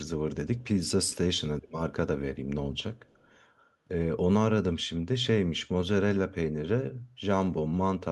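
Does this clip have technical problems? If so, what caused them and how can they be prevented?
Yes. This speech clip has an echo leak. A faint copy of the talker returns about 0.3 s late. It is heard from 0.56 to 0.68 s, roughly 30 dB below the speech. It returns from 2.96 to 3.38 s, fainter at about 40 dB down. The likely cause is a loudspeaker at the far end whose echo canceller let part of its microphone pickup slip back. Headphones or better echo cancellation at that end would prevent it.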